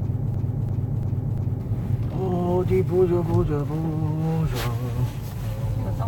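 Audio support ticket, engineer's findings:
Broken-record loop, 0.0 to 1.6 s, already running at clip start: a 344 ms fragment repeats back to back, four times. Likely a stalled player, encoder or stream buffer re-sending its last held fragment. Audio due in that span is lost.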